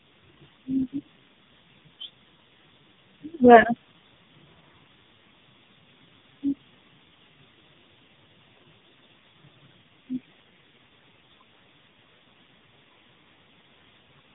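Buzzy, synthetic-sounding speech with nothing above 3.8 kHz throughout: heavy AMR narrowband mobile codec damage, consistent with its lowest 4.75 kbps mode.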